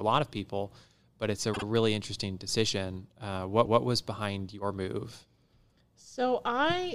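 At 1.53 s, between "people but it's a" and "really interesting decision", the speech stutters from repeated frames. A block of about 52 ms, which fits two compressed frames, plays twice more and adds 104.5 ms. At 3.65 s, just before "was behind your move", a 156.7 ms block, which fits six frames, replays once and stretches the audio by the same amount. The decoder received these stretches of the stream again and played them again.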